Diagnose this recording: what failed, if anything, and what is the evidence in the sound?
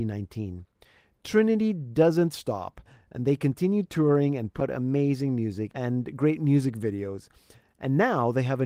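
At 4.60 s, right after "they continue touring and", the sound ticks, mutes for a few milliseconds and resumes at a different point before "amazing music and great". This is a CD skip at the playback stage: the laser jumped to another turn of the disc's spiral.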